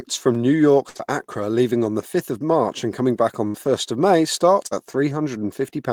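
Speech, with a burst of packet loss at 0.89 to 0.97 s and again at 3.47 to 3.68 s after "and coming back on": the receiver stretches the last sound into a fading buzz or hiss, then speech resumes with about 60 ms gone. Short concealed packet loss at 0.97 to 1.01 s and 4.67 to 4.73 s is briefer, roughly 20 and 40 ms, heard as a quick smear or wobble blended back into the real audio rather than a held, decaying tail.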